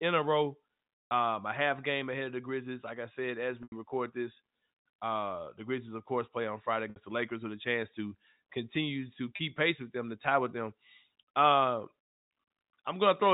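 Speech over what sounds like a G.711 phone line, with four spots of packet loss with pitch repetition: around 1.10 s after "a row", 3.63 to 3.72 s between "I said as" and "record this uh the", 6.90 to 6.96 s, and 9.36 to 9.39 s after "chance to continue to". Each time, the receiver loops the last pitch cycle to cover roughly 30 to 90 ms of missing audio, which you hear as a brief buzzy hold, or on the longer gaps as a fade into silence before the speech cross-fades back in.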